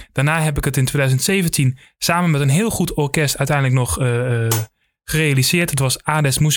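From 5.21 s to 6.40 s, GSM signalling bursts come through under the speech, roughly 25 dB below it: a galloping dit-dit-dit of short buzzes. A nearby 2G handset is exchanging brief radio bursts with its network, and the audio circuitry rectifies that RF into a pulse train at 217 Hz. Unlike mains hum or a steady ground-loop buzz, it comes in uneven clusters with gaps rather than as a continuous tone.

At 5.62 s, within that buzzing stretch, there is one sharp click. Its likely cause is dropped samples: a handful of samples, about 0.1 ms, are missing, so the waveform jumps straight to a later value. The gap is far too short to remove any audible sound. What separates it from the surrounding GSM buzzes is that it happens once and has no 217 Hz buzz. On a spectrogram it appears as a single thin vertical line.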